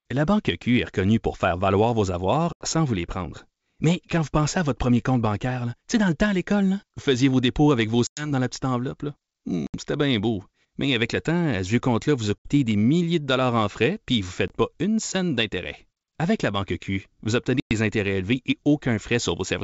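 Packet loss on an ADPCM call cuts holes in the speech at 2.53–2.66 s (80 ms lost), 8.07–8.31 s (100 ms), 9.67–9.75 s (70 ms), 12.38–12.48 s (70 ms), 14.48–14.53 s (20 ms) and 17.60–17.72 s (110 ms). Each is a hard-edged silence, seen as a flat gap in the waveform and a blank vertical stripe on the spectrogram. Afterwards the decoder's predictor and step size no longer match the sender's. The speech therefore resumes slightly distorted before settling within tens of milliseconds. The G.722 wideband coding itself shows at most a faint upper-band hiss.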